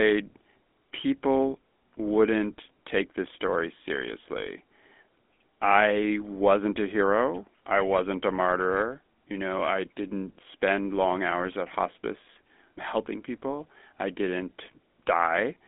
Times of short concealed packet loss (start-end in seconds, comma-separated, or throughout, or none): none